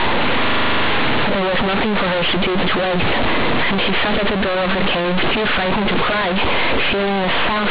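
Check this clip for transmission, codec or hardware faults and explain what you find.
There's one clear fault, and it runs the whole way through: companded audio read as linear. The speech was coded as mu-law but the bytes are being played back as plain 8-bit linear samples, with no expansion step. Because of how mu-law packs the sign and level into each byte, every sign flip throws the output across roughly half its range, so quiet passages come out as loud as the peaks and the waveform gets badly bent. You hear it as very loud, harsh, buzzy distortion with heavy noise filling the pauses. Underneath that, the telephone-band limit of the G.711 coding itself is as expected, with nothing above 4 kHz.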